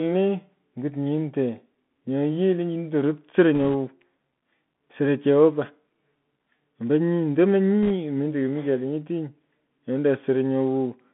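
From the start, the whole clip carries the sound of a Bluetooth CVSD headset codec, which fits a 64 kbps link. Everything sits in a narrow band from about 150 Hz to 3.5 kHz, so the speech is boxy and thin. CVSD sends just one up-or-down bit per sample with an adapting step, and the damage is plainly audible: sibilants come out scratchy, loud bright moments smear because the step can't keep up, and a fine granular hiss sits underneath.

At 3.55 to 3.75 s, bit errors on a Bluetooth voice link break in, with roughly one or two percent of bits flipped. Because each CVSD bit only nudges the signal a little and mistakes fade out, there's no sharp click. Instead you get a short burst of rushing, crackly noise over the speech. The same thing returns at 7.83 to 7.91 s, a bit briefer but slightly denser at around two percent, so the crackle there is a touch rougher.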